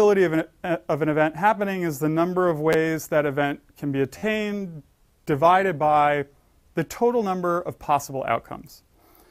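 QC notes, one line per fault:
2.73–2.75 s, repeated buffer: a brief buzzy click as a piece of about 11.6 ms, which fits a 512-sample buffer, plays two extra times with a hard join at each repeat. Fresh audio arrived late, so the device replayed its last buffer. Nothing appears lost.
4.18–4.23 s, repeated buffer: a longer rough buzz as the same short piece of about 11.6 ms sounds four extra times in a row, hard-joined each time. The next buffer was late again, so the device replayed the previous one instead of waiting. No audio seems to be skipped.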